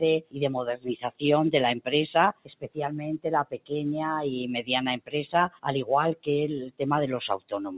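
A noise suppressor applied to music or sounds runs throughout. It mistakes sustained tones and tails for noise, so levels pump by around 10 dB. Sound is cut by the noise suppressor at 0.21–0.37, 2.33–2.78, 3.45–3.71, 4.99–5.14 and 5.5–5.65 s. Each drops by about 17 dB (about 16 dB in the last), and decays sink abruptly. The band-limited call path, with nothing above 4 kHz, fits G.711 A-law at 64 kbps.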